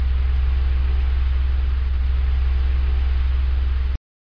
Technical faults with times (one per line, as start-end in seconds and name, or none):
none